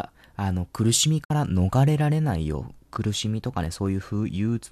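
At 1.24 s there's a digital broadcast dropout: the receiver mutes for 48 ms with a quick 8 ms fade, likely from two lost frames.

From 2.49 to 4.61 s, periodic USB or driver dropouts skip a tiny sliver every 0.125 s, giving around twenty evenly spaced ticks over the speech.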